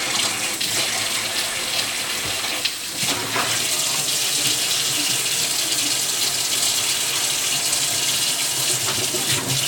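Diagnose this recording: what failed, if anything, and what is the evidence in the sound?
Nothing stood out on listening: no stage of the chain showed a failure that could be heard anywhere in the sound.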